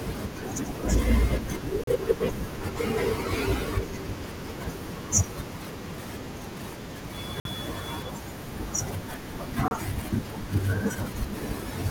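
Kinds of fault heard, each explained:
Bluetooth stall: Radio interference most likely held up packets on the wireless link, so the headphones' buffer emptied and playback had to wait for resent data before it could continue. In this speech clip that shows as three brief dropouts to silence: about 37 ms at 1.84 s, 52 ms at 7.40 s and 30 ms at 9.68 s. Each is a clean gap cut into the speech before the sound carries on.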